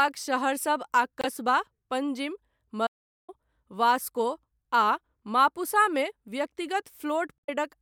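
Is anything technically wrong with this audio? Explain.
Yes, there are faults in this speech clip. From 1.21 to 1.25 s and from 7.36 to 7.49 s there is damaged data in the compressed stream. The decoder misreads the corrupted frames and loses sync, producing a brief chirp or squawk. From 2.87 to 3.29 s there is an audio dropout to silence, likely from a lost input while the recording continued writing silence. About 414 ms of speech vanish into complete silence with no room tone.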